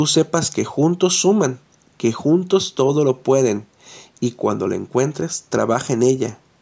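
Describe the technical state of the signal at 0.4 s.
At 0.4 s the speech is intact, with no fault present, only the normal band-limiting of call microphone processing, which leaves nothing above 8 kHz.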